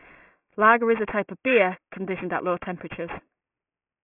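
From start to finish, the speech carries aliasing. The sound was resampled down, which fits a rate of 6 kHz, without a low-pass filter first, so everything above the 3 kHz folding point reflects back below it as unrelated tones, sitting roughly 15 dB under the speech. Sibilants come out gritty and metallic, with energy running right up to the 3 kHz edge. That separates it from plain band-limiting, which would only sound muffled and clean.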